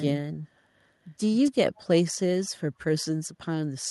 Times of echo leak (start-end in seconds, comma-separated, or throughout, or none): 1.75-1.83